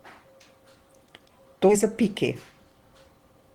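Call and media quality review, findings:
Skip ahead at 1.69–1.71 s in speech. About 0.7 s of audio missing, the two sides butted together with no silence or fill. Probable component: jitter buffer discarding on overflow, or loss in transit. Delay drops by about 0.7 s at the jump. Distinguished from a dropout by the absence of any gap, and from concealment by the absence of smeared or repeated sound.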